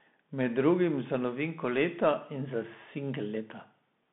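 Bluetooth CVSD headset codec damage runs through the whole clip, and it is plainly audible. The speech sits in a narrow line band of about 150 Hz to 3.6 kHz, with nothing above 3.8 kHz, which fits a 64 kbps CVSD link. Each sample sends a single up-or-down bit against an adapting step size, so fast, loud high content outruns the step: s sounds turn scratchy, and a granular hiss lies beneath the speech.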